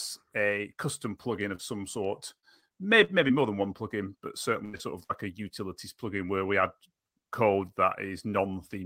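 The first glitch is a short concealed packet loss at about 1.55 to 1.61 s, right after "a custom plugin" and before "some sort". Roughly 40 ms of the stream arrived too late, so the decoder stretched the last bit of speech across the hole and blended back in. It comes across as a quick smear or wobble rather than a clean dropout.

Just after "some sort", from about 2.39 to 3.31 s, there's repeated packet loss, the robotic kind. Five separate gaps land within that span, the longest about 38 ms, and together they make up about 13% of it. Each gap gets patched by extending the last sound, and the next one arrives before things settle. That gives the speech a choppy edge, with pieces missing, all the way up to "more than one plugin".

Then, right after "than one plugin but", comes a burst of packet loss at 4.65 to 4.75 s. About 80 ms in a row went missing, and the receiver held the last sound while fading it down, so you hear a brief buzz or hiss before the speech jumps ahead with that chunk gone. 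Almost immediately, at 4.77 to 4.81 s, there's another short concealed packet loss, only about 20 ms, which is just a small smear. A second burst of packet loss follows at 5.03 to 5.11 s, about 60 ms missing, with the same held-and-fading sound and a skip forward afterward.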